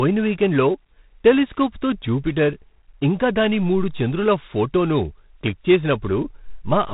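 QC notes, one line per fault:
Throughout: G.726 ADPCM at 24 kbit/s. Each sample keeps only three bits of difference from a running prediction, so a rough, rasping hiss rides on the speech and swells with its loudness. Nothing above 4 kHz survives, leaving the speech narrow and telephone-like.
0.00 to 2.47 s: computer activity noise. A faint buzz pulses at roughly 150 Hz, far below the speech level. It tracks machine load on a shared ground rather than the sound itself, and stops after 2.47 s.
3.95 s: dropped buffer (overrun). A small forward jump, with a few milliseconds of speech missing. The likely cause is samples being overwritten before the software collected them, so the two sides were butted together with no silence between.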